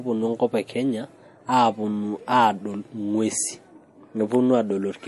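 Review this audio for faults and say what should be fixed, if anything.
Throughout the speech there is plainly audible damage of the kind MP3 compression leaves, likely from encoding at a low bitrate, with the sound pointing to around 48 kbps. Nothing survives above 11.5 kHz, where the encoder dropped the treble to save bits. What separates it from a simple low-pass filter is the watery, swirling texture and chirpy sibilants, as weak frequency lines switch on and off between frames. Encoding at a higher bitrate, or keeping a lossless master, prevents it.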